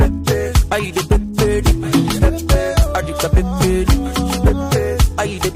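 At 4.76 s there is a single sharp click, likely from dropped samples: a fraction of a millisecond is missing, so the waveform jumps abruptly.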